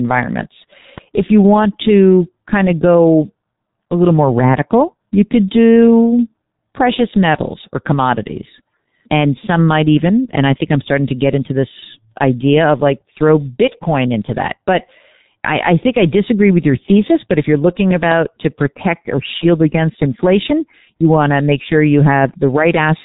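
From the start, the speech carries heavy G.723.1 codec damage. At 6.3 kbit/s with 30 ms frames, a slowly updated voice model flattens detail, leaving muffled, hoarse speech and smeared consonants. A spectrogram shows a hard ceiling at 3.8 kHz, with empty space above.

At 0.98 to 1.00 s a single loud pop rises a little above the speech, likely a voltage step from a plug, switch or static discharge. It sounds like a sharp click over the ongoing speech. The waveform shows a narrow spike, and the spectrogram shows a thin vertical broadband stripe.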